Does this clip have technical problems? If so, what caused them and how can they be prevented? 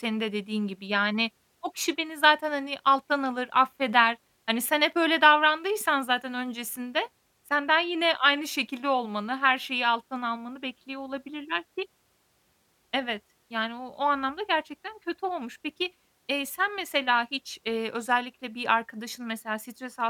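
No, nothing in this speech clip points to a technical problem, so there's no cause to track down and nothing that needs preventing.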